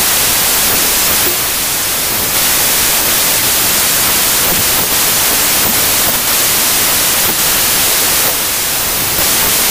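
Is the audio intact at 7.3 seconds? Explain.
No. At 7.3 seconds, as throughout, a wrong sample width garbles the speech. Packed 24-bit samples are read as 16-bit, so bytes recombine into mostly false values. Loud hiss buries the speech, slowed and lowered to 0.667 times. A spectrogram shows broadband noise over faint, downshifted harmonics. The waveform looks dense.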